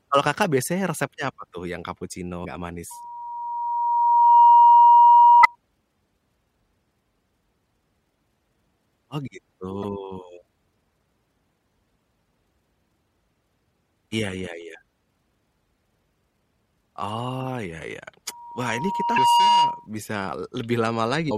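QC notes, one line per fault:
2.41–2.45, 5.41–5.46, 9.81–9.84, 19.14–19.18, 21.28–21.32 s, damaged data in a compressed stream: five brief glitches of roughly 40 ms each. Corrupted bytes make the decoder misread or discard frames, lose sync and jump to the next frame header.
2.90–5.56 s and 18.27–19.87 s (the latter just after "iya iya"), loudspeaker feedback squeal: a single 951 Hz tone swells over about one and a half seconds, then about one second, peaking about 15 dB and about 10 dB above the signal. The microphone re-amplifies its own loudspeaker, and loop gain exceeds unity at that frequency.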